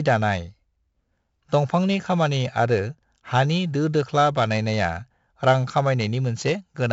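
4-bit ADPCM compression affects the speech from start to finish. Each sample is stored as a coarse 4-bit step from a predicted value. The step size adapts but lags behind the signal. This leaves a gritty hiss that rises and falls with the level of the speech. Sharp onsets distort where the step cannot grow fast enough. The damage is heavy. Nothing is present above 7.7 kHz, so the sound is dull. This points to a 64 kbps stream at a 16 kHz sample rate.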